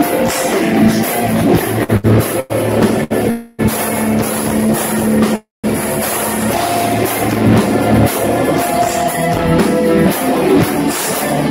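Between 1.83 and 3.12 s the sound hangs briefly four times, at 1.83, 1.97, 2.40 and 3.04 s, each held about 53, 71, 99 and 66 ms with a faint buzz or dip. These are short stalls from a late packet: the jitter buffer ran dry, the last sound was stretched, and playback resumed without losing anything.

From 3.30 to 3.61 s the sound freezes into a fading buzz or hiss for about 0.28 s. From 5.36 to 5.66 s it freezes again, and about 170 ms of that pause is silent. This call audio freeze likely comes from packets held up in transit, draining the jitter buffer until they arrived.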